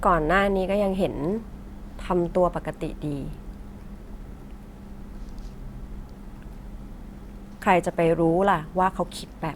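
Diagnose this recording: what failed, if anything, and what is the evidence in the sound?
Nothing in this speech recording points to a failure.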